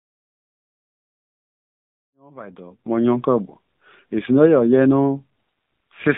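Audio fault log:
throughout: AMR narrowband mobile codec. Speech is confined to 150 Hz to 3.7 kHz, with a blank spectrogram above. The plainly buzzy, synthetic vocal-tract modelling fits roughly 7.4 kbps.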